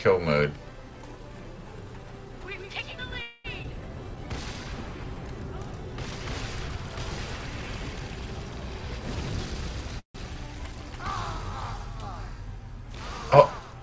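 Starting around 3.22 s there's a call audio freeze lasting to about 3.46 s. The last bit of sound gets stretched into a fading buzz for roughly 225 ms, and then things pick up right where they left off, so nothing is lost. The sound just runs about 225 ms later from that point. That's likely packets getting held up in transit and the jitter buffer running dry, with the receiver papering over the hole.

Right after, at about 3.62 to 3.66 s, comes a skip ahead. Roughly 70 ms of audio just isn't there, and the two sides are stitched together with only a tiny 12 ms join. You hear it as a small jump forward. The receiver was sitting on later audio and dropped a chunk, which takes back about 70 ms of the delay the freeze had just added.

From about 4.04 to 5.16 s there's a jitter buffer slow-down. The receiver repeats single pitch periods over and over to rebuild its reserve, adding about 79 ms in total. 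The audio plays at about 94% speed with the pitch unchanged, so things sound a touch drawn out, maybe with a faint warble.

Later, from about 9.15 to 9.92 s, it flips to a jitter buffer speed-up. The buffer was holding more than it wanted, so it trims short pitch-period pieces many times in a row, roughly 150 ms altogether. That runs the audio at about 118% speed, same pitch but noticeably hurried.

Then at about 9.99 s a second call audio freeze hits, lasting to around 10.30 s. It's a brief buzzy continuation of the last sound that drops into about 120 ms of silence before the audio resumes from where it stopped. About 155 ms gets inserted, with nothing lost. Again, the likely cause is delayed packets starving the jitter buffer.

Underneath all this, nothing comes through above 8 kHz, which fits a 64 kbps G.722 call path.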